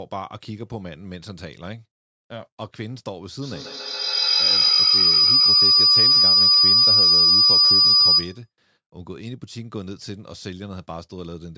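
Feedback howl, 3.42 to 8.52 s: the microphone-to-loudspeaker loop gains level each pass, with repeats about 150 ms apart, swelling into a tone near 5 kHz that peaks about 16 dB over the speech.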